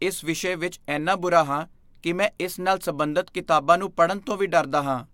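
No faults are audible anywhere in this speech recording.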